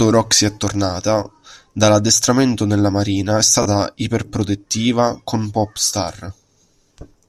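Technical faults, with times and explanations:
3.63 to 3.66 s, Bluetooth stutter: just after "dall'addestramento nella marina è" the speech catches on a brief buzzy repeat, and then resumes at "iperprotettiva con" with a small jump forward. The wireless link lost data for about 29 ms, which fits two dropped packets. The receiver filled the gap by replaying its last short buffer, and that looped slice is the stutter. It then picked up where the live stream had reached, so the missing audio is skipped.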